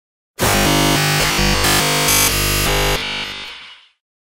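From 0.5 to 3.48 s, the sound turns into a rigid metallic buzz at 50 Hz. This is robotic sound, likely from a 20 ms buffer repeated throughout.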